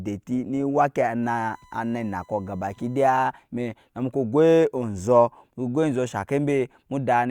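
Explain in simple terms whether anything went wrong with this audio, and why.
Something did go wrong: a USB whine, a faint, steady 1 kHz tone, sits under the speech from 1.23 to 3.23 s. It comes from a USB connection drawing power in regular one-millisecond bursts, which leaked electrically into the recording path.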